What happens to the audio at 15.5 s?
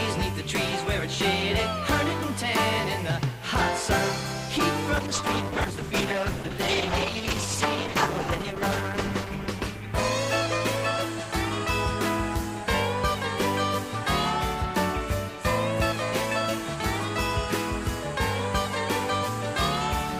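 Nothing goes wrong at 15.5 s; the audio runs through that moment intact, with no dropout, click or other fault.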